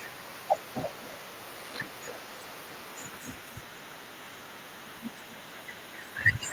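Throughout the speech, an echo with no canceller trails the talker's phrases: a far-end loudspeaker feeds the microphone and the return comes back about a third of a second later, about 14 dB down and thinner. Unlike room reverberation, it arrives as a distinct, delayed repeat, not a smooth tail.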